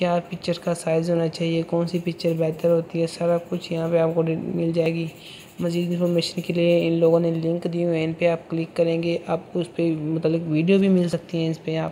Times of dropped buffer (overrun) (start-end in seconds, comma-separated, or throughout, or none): 4.86, 11.13